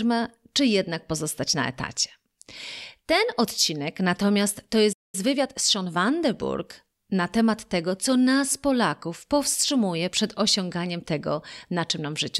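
At 4.92 s the speech cuts off mid-flow and the output falls silent for roughly 206 ms before resuming at 5.15 s. This is a playback stall, likely the player running out of buffered data. The waveform shows a flat gap, and the spectrogram shows a clean vertical blank band.

From 5.15 to 5.97 s the speech runs hurried at about 1.25 times normal speed with its pitch unchanged. This is time-compressed catch-up: small pieces are cut out and cross-faded to clear the backlog. The spectrogram shows compressed syllable spacing with harmonics held at their usual heights.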